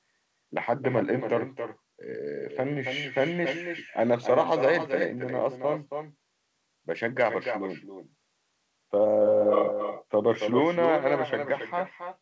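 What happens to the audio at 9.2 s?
At 9.2 s, as throughout the clip, there is echo with no canceller: the far end's loudspeaker feeds its microphone and nothing strips it out. The speech returns about a third of a second later as a thinner copy, only about 7 dB quieter.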